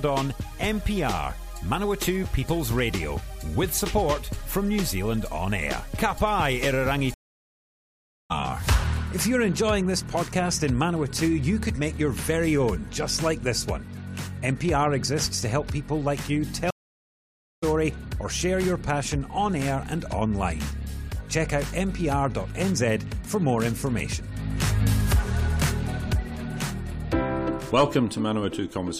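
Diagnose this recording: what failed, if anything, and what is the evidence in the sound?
The network connection dropped twice, forcing a stream reconnect each time. Playback goes silent from 7.14 to 8.31 s and from 16.71 to 17.64 s. A fresh decoder then resumes mid-stream about a second and half a second further on, so audio is skipped.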